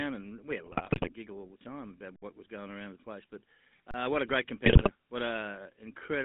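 GSM full-rate coding runs throughout: the speech has a plainly audible buzzy, gravelly roughness from pulse-driven vocal-tract modelling, which fits a 13 kbps GSM stream, with the band confined to about 150 Hz to 3.7 kHz.

GSM bit errors strike from 0.66 to 1.12 s. Corrupted filter, pitch and gain values distort the spectrum and level frame by frame, producing squawks, pops and gargling.

An underrun with held sample falls at 0.94 to 0.96 s, inside that damaged stretch. The output buffer ran dry and the converter froze on its last value, so the sound flattens briefly and stops with little click, then resumes where it left off.

Another underrun with held sample, 60 ms long, comes at 2.16 to 2.22 s, between "the time about" and "what was going around". The same flat hold leaves a soft gap.

A third underrun with held sample runs from 3.91 to 3.94 s, just before "what a great". It is a short, quiet freeze, after which playback continues from where it stopped.

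GSM bit errors return from 4.65 to 4.91 s, right after "what a great". Garbled decoder parameters again bend the spectrum and level, causing gargling, squawky bursts.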